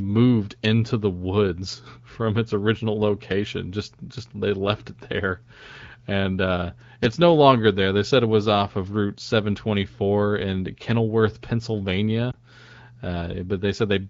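Lost AMR speech frames at 12.31 to 12.37 s: a brief dip or warble, which fits a single 20 ms frame failing its checksum and being concealed at reduced gain.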